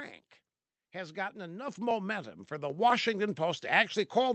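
Speech, carried over a WebRTC call path whose Opus coding limits the top end to about 8 kHz. Periodic USB or driver dropouts recur from 0.91 s to 3.90 s, spaced almost exactly 1 s apart. Each is a tick. About a millisecond of audio is skipped, not filled with silence. A background task is stalling the bus or driver on a fixed schedule. The microphone volume is stepped up twice. At 1.68 s the level jumps by about 8 dB. At 2.70 s it rises again by about 4 dB. Voice and background get louder together. The call software is raising the device input gain in single steps.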